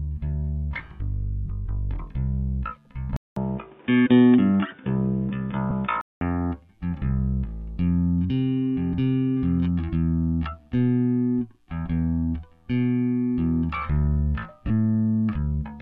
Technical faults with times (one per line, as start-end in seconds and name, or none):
3.16-6.21 input switched to a poorer device
5.70 lost LE Audio frames
14.67-14.70 lost LE Audio frames